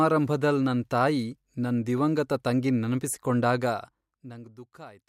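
At 3.6 s the level starts coming down, by something like 20 dB, and it's done in steps rather than a continuous ramp, so you get zipper noise until about 4.62 s. Each jump in gain puts a tiny click into the speech, and at around fifty steps a second they blur into a fine ticking buzz riding on the voice while the level falls.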